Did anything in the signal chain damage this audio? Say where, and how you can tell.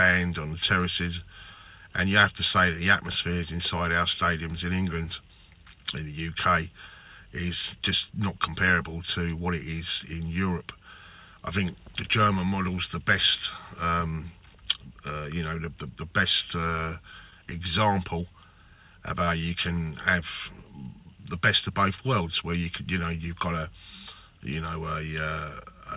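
Yes. Network: scattered short gaps between 16.61 and 17.54 s, where about five lost or late packets, none much longer than 15 ms, were each concealed by extending the preceding sound. Across that span you hear brief ticks and small smears.

Buffer: a jitter buffer slow-down from 18.67 to 19.51 s. Running short, the receiver repeated tiny pitch-period-sized pieces, adding 66 ms, so the audio plays at 93% speed with unchanged pitch, sounding stretched.

Buffer again: a jitter buffer speed-up from 21.69 to 22.65 s, trimming roughly 50 ms of excess queued audio in small cuts. Playback runs at 105% speed, same pitch, giving a briefly hurried feel. All of this sits on the call codec path, whose band stops at 4 kHz.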